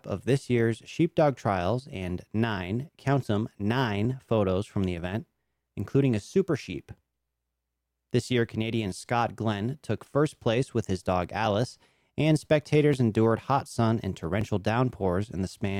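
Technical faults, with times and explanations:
1.09–14.41 s, clock drift buffer slips: a click recurs every 1.48 s, about ten times. Likely two clocks roughly 700 ppm apart, slipping about 50 samples each time.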